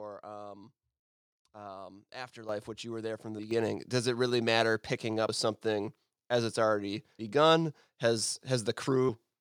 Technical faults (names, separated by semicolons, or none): microphone volume stepped up